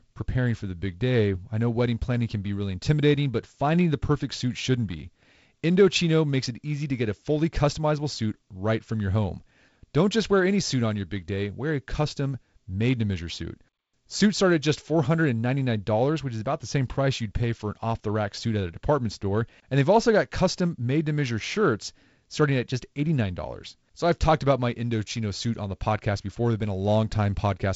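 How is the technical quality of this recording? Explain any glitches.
The technical quality of this wideband telephone speech is sound, with no glitches to explain.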